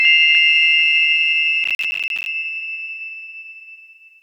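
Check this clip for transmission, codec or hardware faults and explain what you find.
One fault is present: processor overload crackle from 1.64 to 2.26 s, where repeated missed buffer deadlines, roughly twenty buffers of about 10 ms, leave hard-edged silent gaps heard as gritty crackle over the sound.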